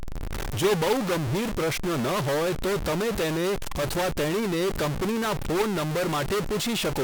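A harsh, buzzy distortion runs through the whole speech recording, and the pauses between phrases fill with a steady noise instead of falling silent. The likely cause is a stuck bit, one data bit held fixed with a weight of around -25 dBFS.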